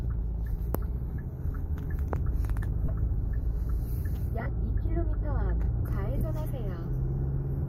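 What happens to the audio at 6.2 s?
Between 6.18 and 6.21 s, about 30 ms of audio comes from lost LE Audio frames, which fits three 10 ms frames. The LC3 decoder refills the gap by repeating the last spectrum with random signs, so the sound turns into a brief noisy smear rather than the hard silence or click of a plain dropout.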